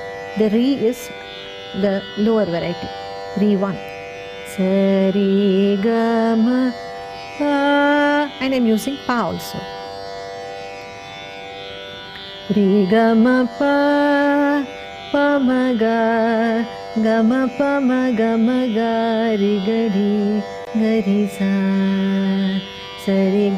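At about 20.65 to 20.67 s there's a tiny dropout: the sound cuts to silence for roughly 18 ms and then carries straight on. That pattern most likely comes from a Bluetooth stall, where a few packets got held up by interference, the headphones' buffer ran empty for a moment, and playback paused until the resent data arrived. It's short enough to register as a small gap.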